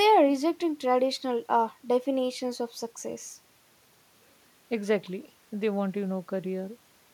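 No technical faults can be heard anywhere in the recording.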